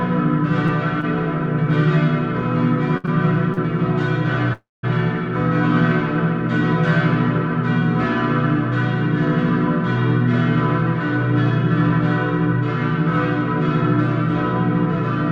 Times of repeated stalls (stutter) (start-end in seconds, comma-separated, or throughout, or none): 2.97-3.59